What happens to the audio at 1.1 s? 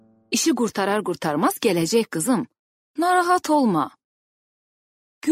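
Nothing goes wrong at 1.1 s; the audio plays through that point cleanly, with no dropout, click or other fault.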